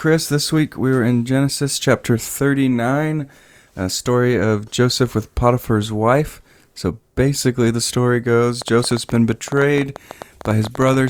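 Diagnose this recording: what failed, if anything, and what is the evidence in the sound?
A train of clicks most likely comes from electrical interference in the analogue wiring or a struggling interface. From 8.62 s to 11.09 s, around thirty similar pops arrive unevenly at about 10.2 per second, peaking a few dB above the speech and ticking through its pauses.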